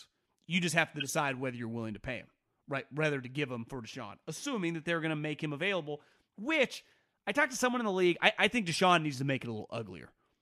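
Flipped bits in compressed frames went to the decoder, which played them anyway, scattering energy into wrong frequencies. This corrupt frame decoded fault gives brief chirpy noise bursts spanning a few frames each: 1.00 to 1.07 s, between "just have to" and "whether you're willing to", peaking around -20 dBFS, and 8.72 to 8.78 s, between "league I I think" and "needs to", somewhat quieter.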